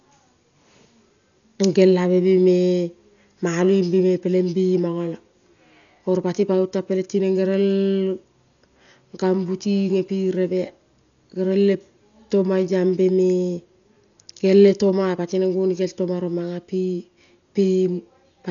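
Heavy Dolby Digital compression affects the speech from start to finish. Nothing remains above 6.9 kHz, so it sounds dull, with rough fluttering noise around tones. The likely cause is a starved encoder, which fits about 48 kbps, leaving frequency lines empty for dither noise.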